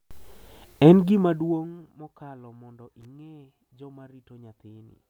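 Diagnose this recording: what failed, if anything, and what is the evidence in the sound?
The failure is in the analogue wiring: a loose connector crackle from 3.01 to 3.05 s in this speech recording. A worn or dirty contact is briefly making and breaking as it shifts. That chops the signal into an irregular scratchy burst, and any DC on the line adds pops at each break. On a waveform it shows as jagged spikes and dropouts over about 40 ms. A spectrogram shows broadband vertical streaks across the full frequency range.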